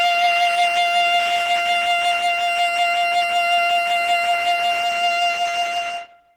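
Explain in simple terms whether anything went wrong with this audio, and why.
Throughout the music, from start to finish, the sound is rough and grainy, with a hoarse, muffled edge to the tones, even though the top end still reaches up to about 20 kHz. This is likely Opus compression squeezed hard into a small file. To save space, the encoder switched to its hybrid mode, which is designed around speech. Rather than keeping every detail of the music, it filled in parts of the sound with noise, which causes the grit.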